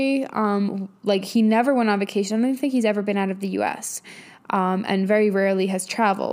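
No technical faults are audible.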